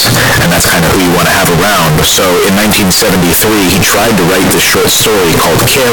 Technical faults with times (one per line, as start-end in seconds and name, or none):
0.00-5.92 float read as integer